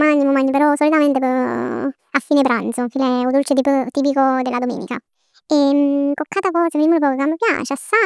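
Speech running throughout at a wrong sample rate, 1.5 times fast and about 7 semitones high together, which fits 16 kHz audio played at 24 kHz, unlike pitch-shifting, which keeps tempo.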